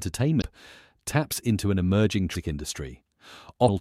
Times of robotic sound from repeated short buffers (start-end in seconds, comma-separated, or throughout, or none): none